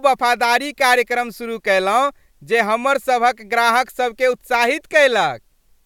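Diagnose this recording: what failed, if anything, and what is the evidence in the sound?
Nothing failed: no fault can be heard anywhere in the speech, so there is no evidence pointing to any stage of the chain.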